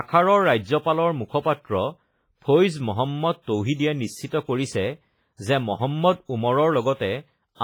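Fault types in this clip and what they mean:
WMA compression: The audio has most likely passed through a Windows Media Audio encoder at a very low bitrate, which fits something near 24 kbps. Its transform blocks spread quantisation noise across tens of milliseconds, and the weaker spectral lines in the speech are zeroed out. Throughout the clip the damage is heavy: a ringing, washy texture with a hiss that swells and fades with the talker, while content still extends up to about 21.4 kHz.
pre-echo: A sharp attack landed late in one of the codec's long transform blocks, so the noise budget set for that loud onset was spread evenly across the whole block, including the quiet stretch before it. At 3.42 s a short burst of hiss, lasting about 53 ms and ending at 3.47 s, runs ahead of the attack. This makes the onset sound softened and smeared instead of crisp.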